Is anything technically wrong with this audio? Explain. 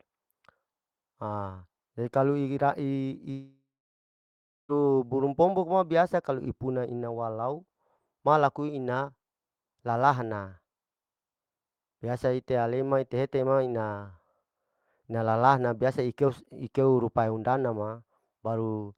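Yes. From 3.31 to 4.72 s the speech breaks off, most likely from a long network dropout. For about 1.4 seconds no new audio reaches the listener. The receiver first stretches the last sound into a short buzzy tail that fades away. About a second of silence follows. The speech then resumes further on. The lost stretch is never played, so the talk jumps ahead instead of picking up where it stopped.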